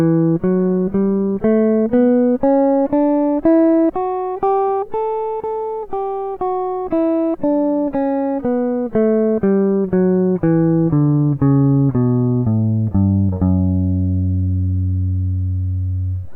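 No technical faults can be heard anywhere in this music recording.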